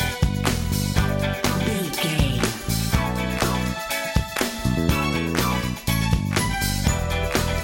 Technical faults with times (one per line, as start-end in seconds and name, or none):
6.20-7.63 mains hum